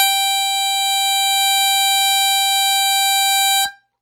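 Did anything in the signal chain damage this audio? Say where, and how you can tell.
Yes, at the codec stage, throughout. The music rings and washes, with hiss breathing alongside it. This is likely WMA compression, fitting a 48 kbps bitrate, with nothing above 19.7 kHz.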